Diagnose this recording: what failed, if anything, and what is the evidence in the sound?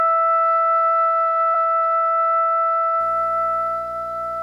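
Damaged data in a compressed stream, at the codec or storage stage: a brief blip cuts into the music at 1.54 s. Corrupted bytes in the encoded file made the decoder misread those frames, lose sync and hunt for the next valid frame header.

Video or display buzz, in the analogue wiring: from 3.00 s to the end, a 60 Hz buzz with hash above it sits well below the music, roughly 30 dB down. A nearby screen or video cable is coupling its field-rate signal into the audio path.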